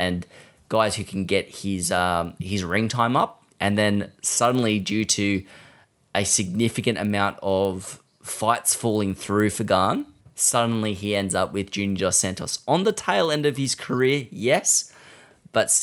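Speech runs through the whole clip over a steady 20 Hz ticking, a buzz-like roughness that sits under the audio only while there is signal and drops away in the gaps. This is the resampler restarted on every block: the conversion, which points to 24 kHz being raised to 48 kHz, was run on each 50 ms block in isolation, so the filter lacked the neighbouring samples at every block edge and left a small error there each time.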